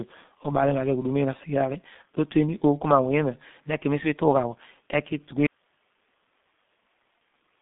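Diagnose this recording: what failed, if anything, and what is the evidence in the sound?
The speech passes through a G.723.1 codec throughout. Nothing is audible above 3.8 kHz, and the usable band sits near 150 Hz to 3.6 kHz. The damage is heavy: a muffled, hoarse tone and smeared consonants. Long 30 ms frames and slow model updates at a rate that fits roughly 6 kbit/s blur every transient.

An audio dropout to a faint residue occurs at 5.47 s. The speech cuts off abruptly and never returns before the end of the clip. Only hiss remains, around 45 dB below the speech level. The likely cause is a lost source feed upstream while the downstream chain stayed live.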